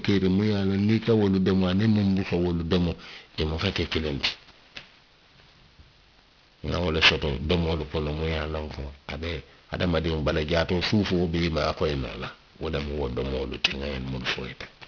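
Aliasing runs through the whole speech clip. The sound appears to have been downsampled to a rate that fits about 11 kHz with no anti-aliasing filter first, so content above 5.5 kHz folds back down as unrelated, inharmonic tones, roughly 10 dB below the speech. Sibilants come out gritty and metallic, with energy pressed right up to the band edge. Simple band-limiting would only dull the top end, without adding this false harshness.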